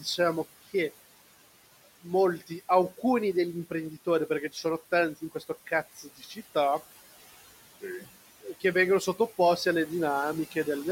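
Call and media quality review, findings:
Mains hum: steady 50 Hz tone throughout, around 30 dB below speech. Ground loop or nearby transformer coupling the power line into the capture path.

Noise suppressor artifacts: throughout, room noise (about 17 dB under speech) pulled down about 15 dB between words, swelling back under speech.

Speech cut by the noise suppressor: 0.0–0.74 s, 1.85–3.03 s, 3.7–4.65 s, 5.21–6.38 s, 7.81–9.66 s. Suppressor misread soft speech as noise; brief fragments swallowed, up to about 15 dB down, longest near 5.2–6.4 s.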